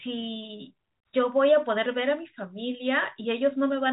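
Nothing stood out on listening to this speech clip, which carries the narrow telephone bandwidth of G.711 coding with nothing above about 3.8 kHz.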